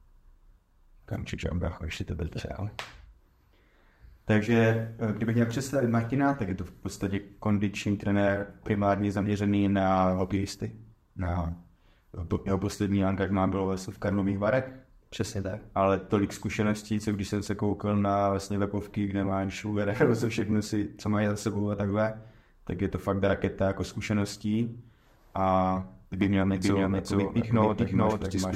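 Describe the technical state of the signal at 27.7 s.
At 27.7 s a doubled audio track is present, from 26.21 s to the end. A full-band copy trails by roughly 400 ms at about equal level, likely re-captured through a slower path. It sounds like a dry, undecaying echo. The waveform and spectrogram show each event repeated, shifted right.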